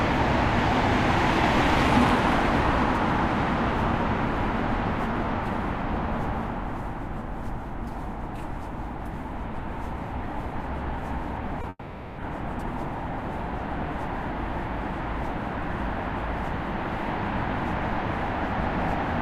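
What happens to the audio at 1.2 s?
Nothing goes wrong at 1.2 s; the sounds carry on intact through that moment with no dropout, click or distortion.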